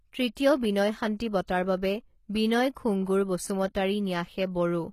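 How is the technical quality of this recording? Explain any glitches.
The technical quality is compromised by plainly audible codec damage that runs through the whole recording. HE-AAC compression is the likely cause, present from start to finish. The lower spectrum is coded directly, while the treble is regenerated by copying lower bands upward under a coarse envelope, which fits a very low bitrate of around 20 kbps. Because that rebuilt treble isn't the original, harmonics misalign across the crossover, so s sounds come out gritty, metallic and lispy, and nothing is present above 14.9 kHz.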